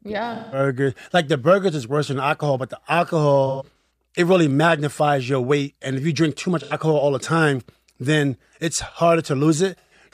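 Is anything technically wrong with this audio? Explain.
Yes. AAC frame loss with concealment occurs four times in this speech: 0.35–0.59 s, 3.46–3.81 s (scattered gaps before "it really magnifies your", longest roughly 150 ms), 6.62–6.73 s (between "you drink too much" and "all the time then"), and 9.78–9.94 s. Each time, compressed frames went missing and the decoder rebuilt them from the last good spectrum, so these short dropouts sound like smeared, noisy, phasey patches.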